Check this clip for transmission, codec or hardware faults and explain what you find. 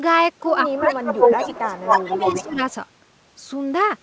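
Two kinds of fault are audible: speech suppressed in double talk, and echo leak. The band stops at 8 kHz, which fits the G.722 call path.

Speech suppressed in double talk occurs from 0.66 to 1.02 s, 1.39 to 1.55 s and 1.81 to 2.62 s. The speech sinks by about 20 dB in the first stretch and by about 10 dB in the other two. The likely cause is an echo canceller that could not tell the near talker from the returning echo, so it turned both down.

Echo leak runs from 0.8 to 2.44 s. A delayed copy of the speech trails the original by 237 ms. It sits a few dB above the speech itself. The likely cause is a loudspeaker on one side whose echo canceller let part of the pickup through and sent it back.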